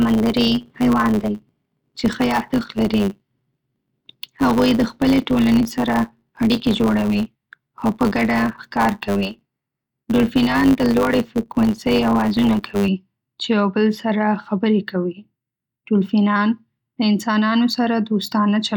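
Speech, with a block size mismatch (truncated) from 0 to 12.88 s. A 100 Hz buzz runs underneath, and the speech plays about 1.07 times fast. The tail of each block is dropped, which fits 512-sample writes. It clears before "چې یو بل سره".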